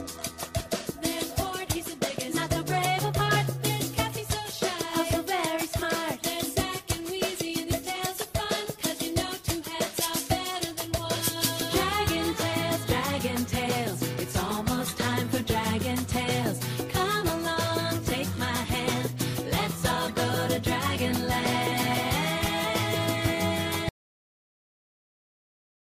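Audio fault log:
23.89 s to the end: audio dropout to silence. The sound cuts off abruptly and the last two seconds or so are dead silence, with no room tone at all. The input was likely lost, so the recorder just kept writing silence until the end of the clip.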